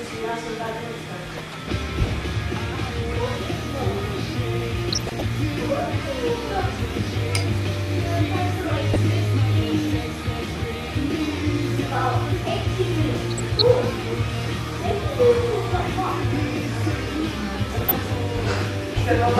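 Throughout, the sound is dull and granular with a gurgling edge, likely MP2 compression, consistent with about 80 kbps, where starved upper sub-bands switch off and the remainder are coarsely quantised.

DAB burbling occurs at 1.26–1.68 s, 4.85–5.22 s, 6.59–6.73 s, 8.93–8.96 s, 13.31–13.62 s and 17.72–17.91 s. Bit errors slipping past error correction throw individual sub-bands out of level, producing short blips of noise and brief jumps in level within single sub-bands.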